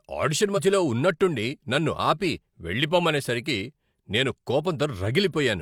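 A small jump forward in the speech at 0.53 to 0.59 s and at 2.45 s: compressed frames skipped, each dropping about one 42.7 ms frame of audio.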